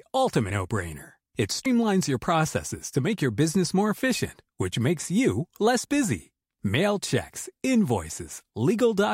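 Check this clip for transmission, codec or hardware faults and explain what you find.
Compressed frames skipped at 1.66 s: around four frames of the speech never reach playback, so roughly a tenth of a second vanishes and the audio jumps forward just before "your processes to make".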